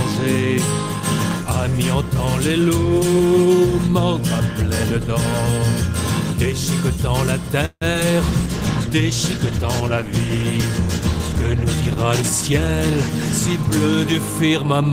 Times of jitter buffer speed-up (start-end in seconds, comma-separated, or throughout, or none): 12.18-12.91, 14.13-14.91